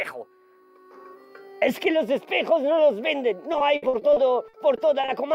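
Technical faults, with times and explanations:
3.53–5.09 s, repeated packet loss (robotic sound): about ten short holes, none longer than 60 ms, are patched by extending the preceding sound, so about a fifth of the stretch is stand-in audio. The waveform shows stuttering repeated cycles and the spectrogram smeared, striped blocks, giving a choppy sound.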